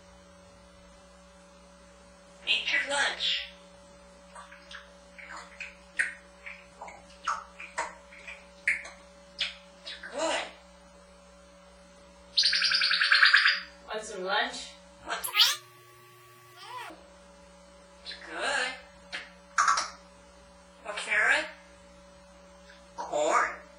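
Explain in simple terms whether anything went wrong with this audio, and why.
From 15.24 to 16.90 s there's a section at the wrong speed. It plays twice as fast and jumps way up in pitch, likely from a clock mismatch.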